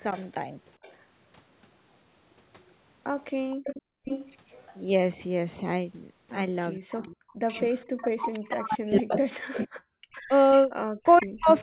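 From 0.15 to 0.93 s a very faint copy of the speech trails the original by about 460 ms. This is an echo leak, likely from a far end playing the call on a loudspeaker with an echo canceller that did not remove all of what its microphone picked up. A stronger return follows from 3.2 to 4.74 s at about 469 ms delay, sitting only moderately below the direct speech. It is band-limited to 4 kHz like the rest of the G.711 call audio.

Inside that stretch, from 3.94 to 4.05 s, the room sound drops by about 34 dB for roughly a tenth of a second and then returns. That is background gated by the echo canceller: while the loudspeaker signal was active, the canceller clamped the microphone path, briefly cutting the ambience.

From 6.84 s to the end at 11.62 s, speech suppressed in double talk makes the talker's level dip, lose its top end or break into pieces, at worst by roughly 40 dB. The likely cause is the canceller failing to separate local speech from the loudspeaker echo while both sides talked, and so attenuating both. 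The echo leak returns from 6.97 s to the end at about 483 ms delay, again fairly strong. A second background gating at 9.87 to 9.98 s pulls the room sound down by about 40 dB for roughly 100 ms.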